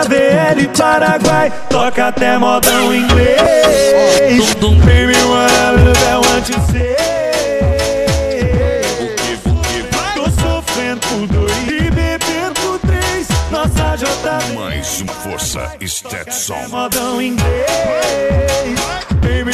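At 3.43 to 3.46 s a brief glitch cuts through the sound: damaged data in a compressed stream. Corrupted bytes there leave the decoder unable to read those frames, so it loses sync and hunts for the next valid frame header before playback resumes.

At 6.48 s the whole signal, background noise included, abruptly drops by about 6 dB and stays at that lower level to the end. This sudden gain jump was likely caused by a digital level change applied instantly rather than ramped, such as a one-bit shift.

At 11.67 to 11.70 s the same kind of short glitch returns, a second instance of damaged data in the compressed stream as the decoder again discards unreadable frames and resynchronises.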